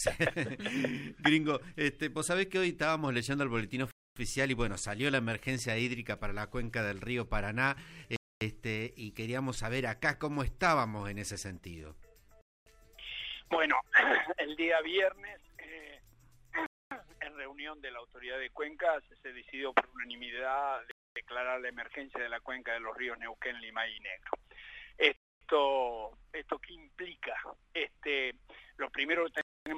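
Gap between chunks at 3.91, 8.16, 12.41, 16.66, 20.91, 25.16 and 29.41 s: the audio arrives in 4-second chunks, and each join leaves 250 ms of silence before the next begins. Nothing is lost, but the sound stops abruptly in hard-edged holes at a steady rhythm.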